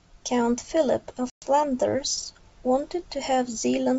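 A short speech clip carried over a G.722 wideband call at a bitrate that fits 64 kbit/s, with its faint upper-band hiss. At about 1.30 s there's packet loss on an ADPCM call: a hard-edged gap, roughly 120 ms of audio (something like seven packets), replaced by silence until about 1.44 s. Because ADPCM decodes each sample relative to the previous ones, the lost stretch leaves the decoder's predictor and step size out of step with the sender's, so the speech that resumes after the hole has to pull them back into line.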